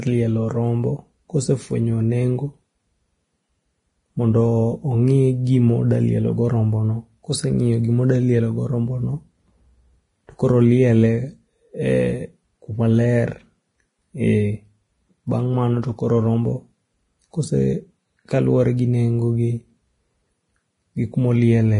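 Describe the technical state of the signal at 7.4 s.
At 7.4 s, as across the whole speech clip, heavy damage likely from Vorbis compression at a low bitrate: a spectrogram shows nothing above 10.6 kHz, with grainy, noisy treble and smeared attacks.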